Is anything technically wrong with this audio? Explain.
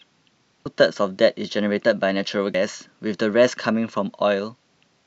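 Yes. At 0.66 to 0.69 s and again at 2.54 to 2.58 s, the speech is interrupted by a brief chirp or squawk lasting about 30 ms. These are signs of damaged data in a compressed stream. Part of the encoded data was lost or corrupted, so the decoder misread those frames, lost sync and had to search for the next valid frame header. That short burst of garbled output is what breaks into the speech.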